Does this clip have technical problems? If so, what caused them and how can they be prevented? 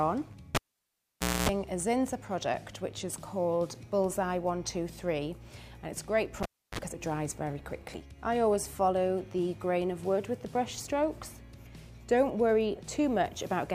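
Yes. A cable pulled and plugged in twice: from 0.55 to 1.49 s (0.89 s unplugged, including a 0.26 s 60 Hz buzz) and from 6.43 to 6.79 s (0.31 s gap, 0.04 s 50 Hz buzz). A pop opens each event, the signal drops, mains buzz enters while only the plug tip touches, and a second pop brings the audio back. That pop-gap-buzz-pop sequence separates it from a plain dropout or steady hum. Mute the channel before touching connectors.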